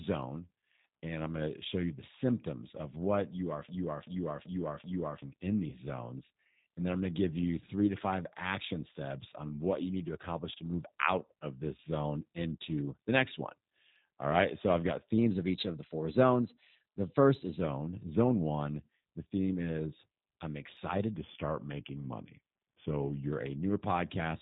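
Throughout, the speech carries plainly audible G.729 codec damage. The 8 kbit/s coding cuts everything above 4 kHz and leaves a rough, synthetic edge.

From 3.69 to 5.22 s, just after "of what you are", a broken-record loop repeats one 0.38 s piece four times. A stalled stream likely kept resending its last fragment.

At 5.70 to 5.79 s, VoIP packet loss concealed by the speech codec fills about 20 ms of missing audio, which fits two lost frames. The decoder stretches its last sound into a brief, fading buzz or coloured noise.

From 15.18 to 17.61 s, after "I've got", a drift correction step speeds playback by 6.2%. Pitch rises by 104 cents, about a semitone. It snaps back before "zone one the theme". A clock-matching buffer likely changed rate in one jump.

From 21.17 to 23.30 s, after "theme is I'm excited", a second drift correction step slows playback by 6.2%. Pitch drops by 111 cents, then returns.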